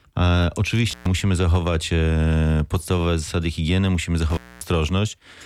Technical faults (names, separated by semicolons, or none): intermittent contact